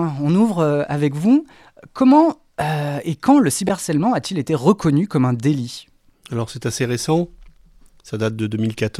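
At 3.68 to 3.70 s the speech is broken by a brief glitch. It lasts only about 22 ms. This is damaged data in a compressed stream. Some of the coded bytes in that spot are corrupt. The decoder cannot read those frames properly and loses its place. It then hunts for the next valid frame header before normal decoding resumes. What fills the gap is heard as a short glitch in the speech.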